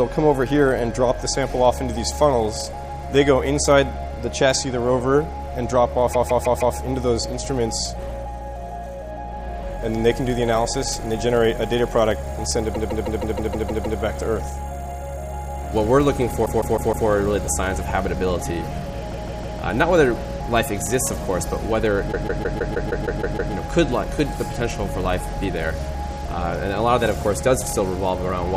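Repeated frames at 6.13, 12.74, 16.45, 19.11 and 22.11 s: a 157 ms block, consistent with six compressed frames, replays 4, 8, 4, 3 and 9 extra times. Each run stutters and lengthens the audio.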